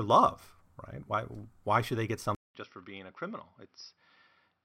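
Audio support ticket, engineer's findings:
Speech from 2.35 s to end of clip turns dull and boxy after a gap of about 0.2 s: likely an input switched to a poorer device. Nothing above 5.7 kHz, level roughly 10 dB lower, new background noise about 50 dB under the speech. A plain bandwidth drop would not bring the gap, the level step and the changed noise floor all at once.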